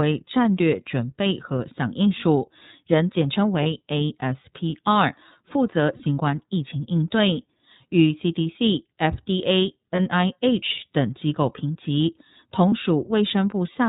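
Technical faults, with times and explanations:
throughout: iLBC codec. The speech is band-limited, with nothing above 4 kHz, and has a plainly audible rough, slightly synthetic texture. The narrowband codec discards everything above the telephone band and rebuilds each block of audio from a coded excitation that does not borrow from the block before. The band limit and texture fit iLBC at about 13.33 kbps with 30 ms frames.
3.63 s, 5.97 s, 9.95 s, 12.69 s: lost iLBC frames. At each point a brief held, slightly buzzy or breathy vowel-like sound replaces the speech for about 30 ms, and the speech returns cleanly at once. When a packet goes missing, the decoder fills the hole by repeating the last pitch cycle blended with noise. Because each frame decodes independently, the next good frame restores the speech with no lingering smear.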